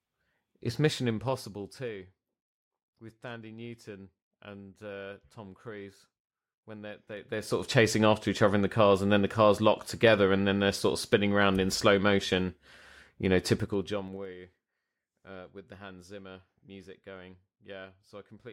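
Level changes in this speech are applied in coarse steps, with no smoothing between them. The result is zipper noise, a ticking that rides on the voice while the level moves. From 0.77 to 2.13 s the level drops by around 20 dB in steps of about 1 dB, roughly ten a second. After "when they're", from 7.08 to 7.68 s, it rises by around 20 dB in steps of about 3 dB before "of chasing after each". After "you know", from 13.57 to 14.34 s, it falls by around 20 dB in steps of about 2 dB.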